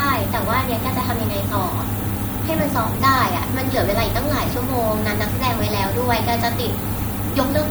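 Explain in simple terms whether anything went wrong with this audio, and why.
Something did go wrong: the whole speech clip, start to finish, has a steady, thin hiss that gets sharper and brighter toward the top end. That's low bit depth with noise shaping. The audio was stored with very few steps of loudness, which fits roughly 6 bits, and the rounding errors were pushed up into the high frequencies. So you get fizzy hiss that stays loud next to the speech.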